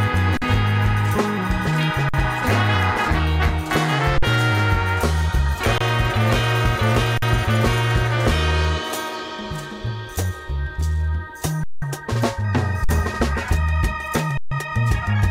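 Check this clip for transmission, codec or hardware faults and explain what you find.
The playback path repeatedly ran its output buffer dry, causing an underrun with held sample at eight points: 0.37–0.42, 2.09–2.14, 4.18–4.23, 5.78–5.81, 7.18–7.22, 11.64–11.82, 12.84–12.89 and 14.37–14.51 s. Each time, the converter froze on its last value until data arrived. Most gaps last about 46 ms, which fits a 2048-sample buffer. The longest is about 186 ms. The sound briefly flattens into a held level, then picks up where it paused, giving soft restarts rather than sharp clicks.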